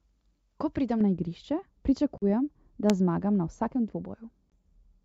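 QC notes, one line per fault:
1.01 to 5.04 s: de-emphasis applied wrongly. From just after the first second the treble falls away smoothly. By 10 kHz it sits about 11 dB below the level at 1 kHz. A treble-cut filter meant to undo pre-emphasis has acted on audio that never had any boost, or acted a second time. The top of the spectrum is pulled down, so the speech turns dull and muffled. The clarity of the wideband call path is lost with it.
2.18 to 2.24 s and 4.50 to 4.52 s: packet loss on an ADPCM call. There are two hard-edged gaps of silence, about 40 ms and 20 ms long. Those lengths fit roughly two packets and then one. ADPCM sends only differences, using an adaptive predictor and step size. When packets vanish, the receiving decoder's state drifts from the sender's. So the speech resumes slightly distorted, then settles within tens of milliseconds.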